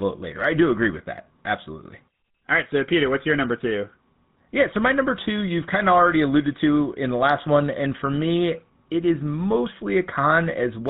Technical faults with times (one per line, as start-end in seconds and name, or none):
0.00-10.89 GSM full-rate codec